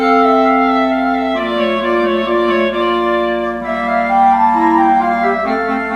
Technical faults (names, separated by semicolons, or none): mains buzz